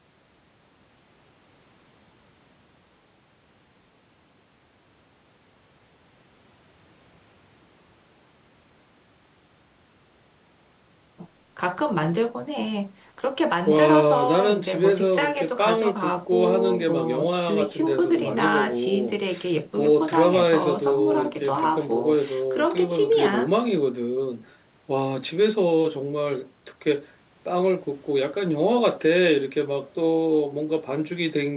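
Speech, with no technical faults to report. Everything above 4 kHz is missing, the narrowband sound of an ordinary phone call, which fits the G.711 A-law codec on the call path, and the microphone processing's high-pass filter trims only the lowest bass.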